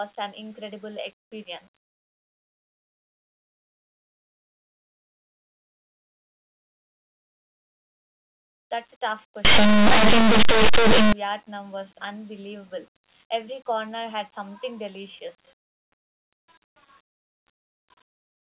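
Linear audio read as companded, from 9.45 to 11.13 s: plain 8-bit samples are decoded as mu-law codes, so quiet values just on one side of zero leap to the largest outputs. The speech collapses into loud, harsh distortion.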